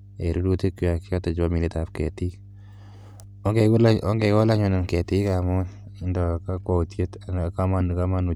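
Mains hum runs under the speech from start to finish: a steady low tone at 50 Hz with some low harmonics, sitting roughly 20 dB below the speech. Power-line current has leaked into the signal path, through a ground loop or a nearby transformer. What separates it from rumble or wind noise is its fixed pitch: it never drifts, never swells with the speech, and stays equally present in the pauses.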